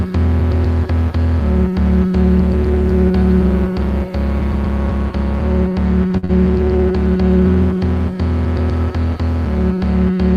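At 6.17 s there is a short stall from a late packet. A packet arrived late and the jitter buffer ran dry. The receiver held the last sound for about 54 ms, then resumed where it stopped. Nothing is lost, but the sound drags briefly, adding 54 ms of delay.

Right after, from 6.25 to 6.31 s, comes a short concealed packet loss. About 40 ms of audio never reached the decoder. The receiver filled the gap by extending the preceding sound, then blended back in. It comes across as a brief smear or wobble.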